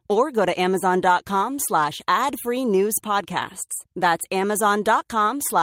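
Nothing in this speech recording stands out as a technical fault; there's nothing to flag anywhere along the way.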